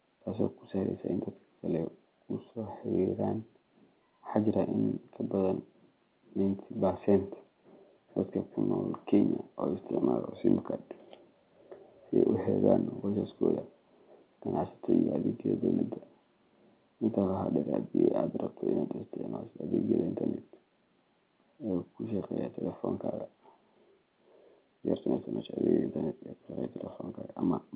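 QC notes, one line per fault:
The speech is carried on standard mu-law G.711 telephone coding at an 8 kHz sampling rate, so the band stops at 4 kHz and only that format's faint, level-following quantisation noise sits beneath the signal, with no faults present.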